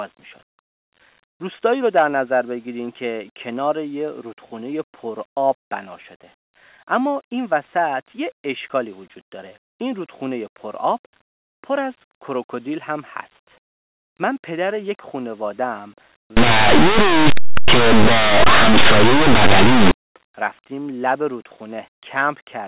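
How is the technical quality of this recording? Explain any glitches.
There's one real glitch here. From 16.37 to 19.91 s the speech breaks into very loud, harsh distortion. That's linear audio read as companded: plain 8-bit samples get expanded as if they were mu-law codes, so small values just to one side of zero blow up into huge outputs and the waveform turns to loud, harsh distortion.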